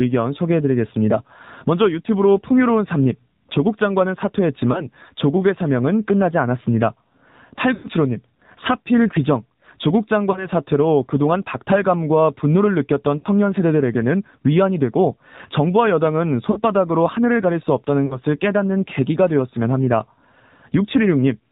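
The whole clip runs through the AMR narrowband mobile codec, at a low rate that sounds like about 7.4 kbps, so the speech is buzzy and synthetic with nothing above 4 kHz. On top of that, lost AMR speech frames hit at 4.72, 7.74, 10.32, 13.18, 16.52 and 18.06 s. Each time the decoder reuses its last good settings at falling gain; at 4.72 and 10.32 s, where a single frame is lost, this gives a quick dip or warble. The one at 7.74 s is the longest, dragging and fading out.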